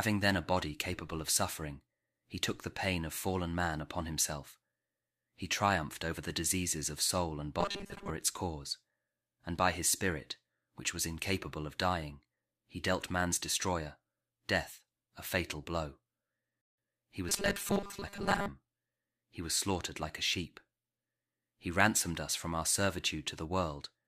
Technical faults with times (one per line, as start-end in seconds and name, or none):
7.60-8.10 robotic sound from repeated short buffers
17.29-18.48 robotic sound from repeated short buffers